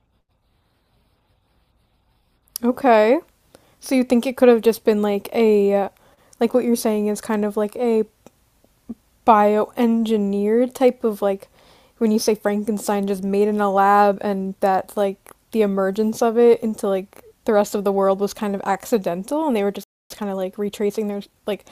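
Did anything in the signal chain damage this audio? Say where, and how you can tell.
Yes. The speech stops dead at 19.84 s and stays silent for about 0.27 s, resuming at 20.10 s. This is a playback stall at the playback stage, likely the player's buffer running dry or its thread being blocked, so output halted until data returned.

From 20.10 s to 21.60 s the speech sounds hurried, running at 1.15 times normal speed with unchanged pitch. That is time-compressed catch-up in playback. The player trims its backlog by cutting out short segments and cross-fading across the joins.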